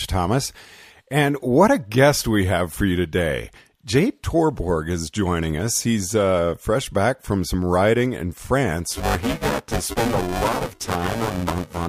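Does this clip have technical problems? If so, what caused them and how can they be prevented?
Yes. Buffer tearing runs from 8.91 to 11.87 s: the speech takes on a robotic 345 Hz buzz, which fits a 128-sample buffer. The writer and reader have drifted so that roughly half of each buffer replays audio about 10 ms old, with hard joins at each edge. Keeping the write pointer safely ahead of the read pointer, with proper period synchronisation or a larger buffer margin, prevents this.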